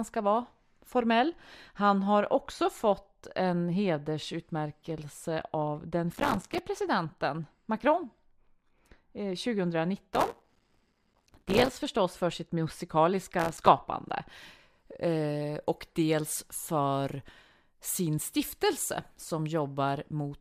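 Speech with a de-emphasis filter applied wrongly from 0.0 to 14.29 s, a smooth treble slope about 10 dB down at 10 kHz relative to 1 kHz, dulling the sound gradually rather than with a low-pass's sharp cutoff. Processor overload crackle appears at 6.13–6.59 s, 10.14–11.69 s and 13.40–13.68 s. Strings of missed buffers, each leaving a silent gap of a few milliseconds, produce gritty tearing that starts and stops with the load, unrelated to level as clipping would be.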